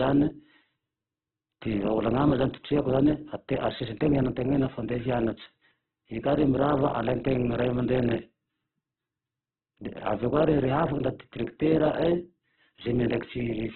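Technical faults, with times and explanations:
Throughout, Opus compression: the speech is heavily damaged, with nothing above 4.2 kHz, so it sounds narrowband, rough and grainy. Bands starved of bits get filled with folded or noisy content, which fits a likely very low bitrate around 8 kbps.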